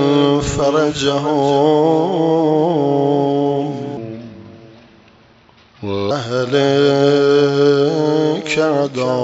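Clock drift between sender and receiver runs through the whole clip: the sending side's clock appears to run about 4 percent fast, so the receiver's jitter buffer keeps overfilling and must shed audio to stay in step, producing small uneven hiccups. Repeated timing corrections run from 0.10 s to 9.23 s, all in the same direction and consistent with a 104 percent playback rate, as the receiver trims short slices at irregular intervals. A section at the wrong speed from 3.97 s to 6.11 s plays at 0.795 times normal speed, dropping the pitch about four semitones so the sound turns deeper and slower together, likely because that stretch was rendered against the wrong clock. The call path's band limit is also present, with nothing above 8 kHz, which fits G.722 running at 64 kbps.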